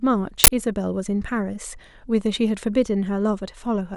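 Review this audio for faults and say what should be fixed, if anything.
There is an uninitialised buffer fault from 0.44 to 0.48 s. A short, very loud burst of digital noise cuts into the speech there. It lasts about 40 ms, which fits one audio block being sent out before anything was written into it. Whatever was left in that memory got played as samples. The result is harsh noise unrelated to the speech. To prevent it, zero-fill every buffer or output silence until real audio has been written.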